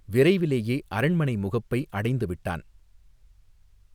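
No technical faults can be heard anywhere here.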